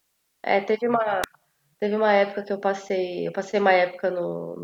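A speech recording with an electrical switching spike at 1.24 s: a sharp snap peaking around -5 dBFS and lasting only a few milliseconds, likely picked up from a nearby switch or discharge. Unlike a dropout or edit click, the speech carries on unbroken beneath it.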